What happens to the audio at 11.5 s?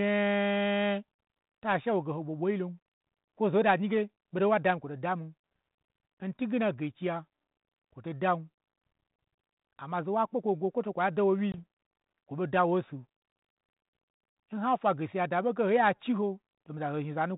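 Right after "kwoto kwa da won", the speech drops into a sharp-edged gap of silence at 11.52 s, and when it resumes there is a little roughness that clears by about 11.58 s. This is packet loss on an ADPCM call: roughly one packet, about 20 ms of audio, went missing on the 32 kbit/s G.726 link. The decoder's adaptive predictor and step size lost track of the sender's, and they need those few tens of milliseconds to realign.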